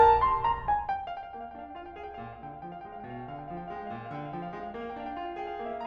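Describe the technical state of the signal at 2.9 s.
At 2.9 s the music plays through intact, with no fault present at that point.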